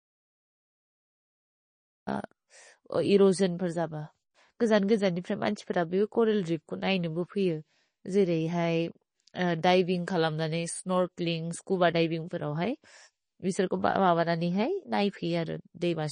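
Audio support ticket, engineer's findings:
Dead silence from the very start to 2.07 s, no room tone at all, audio already cut when the clip begins. Audio dropout to silence, likely input lost upstream (device or link) while the recorder kept writing silence.

Watery, swirly texture throughout, with smeared onsets and hiss-like sounds turning metallic. Top end stops dead at 9.8 kHz. Likely MP3 compression starved of bits, which fits a low bitrate around 32 kbps: treble cut, weak bands flickering frame to frame.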